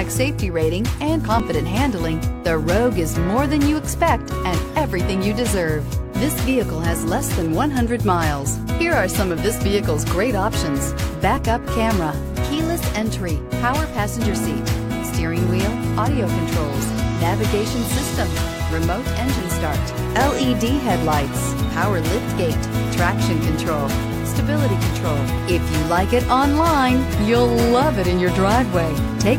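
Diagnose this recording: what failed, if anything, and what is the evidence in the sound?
Overlap between stream segments in network delivery: timestamps overlapped, so the player discarded 38 ms of sound from 1.40 to 1.44 s, causing a waveform jump heard as a brief skip.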